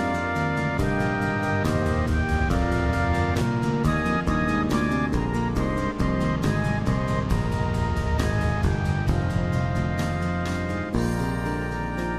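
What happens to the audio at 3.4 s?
At 3.42 s, damaged data in a compressed stream briefly derails the decoder, causing a short glitch; a spectrogram shows a thin vertical disruption.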